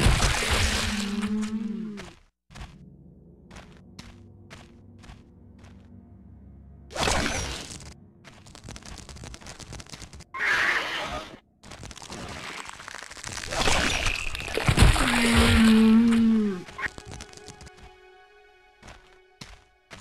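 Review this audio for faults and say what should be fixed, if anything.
A broken MP3 bit reservoir is the likely cause of the disturbance from 13.89 to 13.92 s, where the audio jumps ahead and about 32 ms come out corrupted. That span is a little over one 26.1 ms MP3 frame. When frames are dropped from a stream, the frame that follows still expects part of its data in earlier frames it borrowed space from, reads bytes belonging to something else, and decodes them as a short burst of wrong sound. To prevent it, cut or splice MP3 streams only on whole, self-contained frame boundaries, or decode to PCM before editing.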